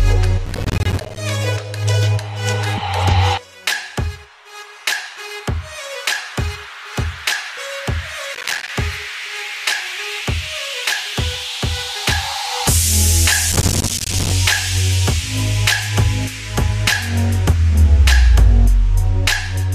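A processor too busy to finish its audio buffers on time causes processor overload crackle three times: from 0.46 to 1.17 s, from 8.35 to 8.69 s, and from 13.52 to 14.32 s. In each stretch many deadlines slip in a row, and every missed buffer drops out as a tiny hard-edged gap of silence. The gaps are spaced in a way that fits a buffer of around 5 ms. Packed together, they make a gritty, tearing crackle over the sound that stops once the load eases.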